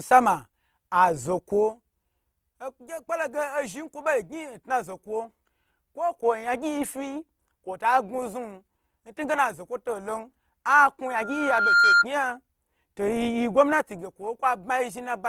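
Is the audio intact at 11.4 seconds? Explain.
No. A loudspeaker feedback squeal runs from 11.06 to 12.05 s. The microphone picks up the loudspeaker it drives, and at 1.4 kHz the loop gain exceeds one, so that single tone grows by itself over roughly 0.7 s into a squeal about 10 dB above the speech.

Across the whole clip, including this moment, the audio is plainly grainy, rough and noisy in texture. The likely cause is Opus compression in its music (CELT) mode at a rate that fits about 24 kbps, where starved bands are filled by folding or noise instead of being left empty.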